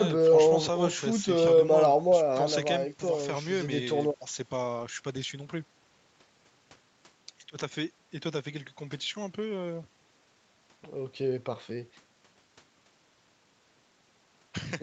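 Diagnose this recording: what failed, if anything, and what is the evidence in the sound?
Nothing stood out on listening; the speech comes through the call microphone processing and the Opus call path with its content stopping at about 8 kHz, as that path normally leaves it.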